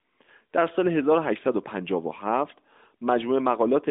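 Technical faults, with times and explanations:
No technical faults are present; the speech comes through a narrowband mobile path, likely the AMR-NB codec at its top rate of about 12.2 kbps, with the band ending near 3.7 kHz and only light coding texture.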